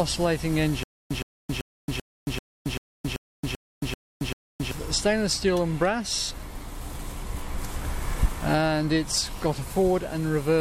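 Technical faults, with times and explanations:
0.83 to 4.71 s, stutter with silent gaps: a 115 ms burst repeats ten times, each followed by 273 ms of silence. The stream likely stalled, replaying its last fragment and losing the audio in between.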